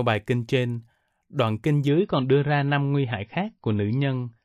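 From 1.88 s to the end, the adaptive stream drops to a lower bitrate: nothing above 5.8 kHz, swirly artefacts, and, unlike a dropout, no gap.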